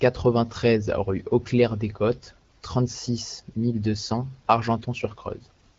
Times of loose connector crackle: none

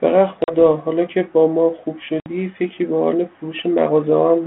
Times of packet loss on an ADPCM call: 0.44-0.53, 2.20-2.27

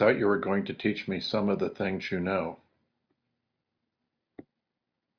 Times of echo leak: none

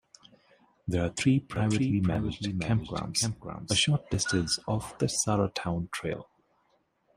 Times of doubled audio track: 1.56-3.80

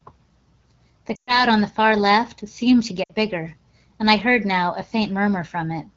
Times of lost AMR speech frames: 1.15-1.45, 3.03-3.13

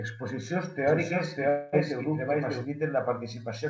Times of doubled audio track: 0.87-2.65

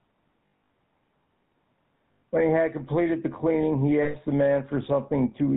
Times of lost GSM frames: 0.46-0.70, 2.12-2.22, 4.02-4.16

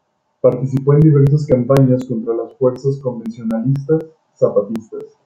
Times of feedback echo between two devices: none

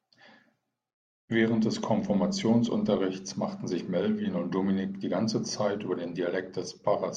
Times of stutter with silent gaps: none

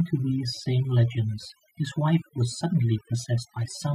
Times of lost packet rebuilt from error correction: none

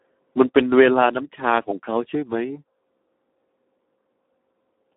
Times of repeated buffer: none

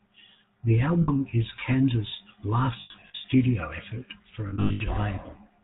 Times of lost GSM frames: 1.02-1.09, 2.80-3.29, 4.48-4.81

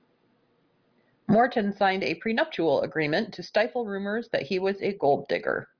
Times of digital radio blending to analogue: none

